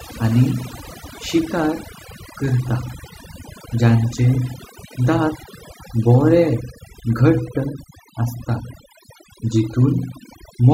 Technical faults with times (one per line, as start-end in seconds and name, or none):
0.00-10.73 overdone noise removal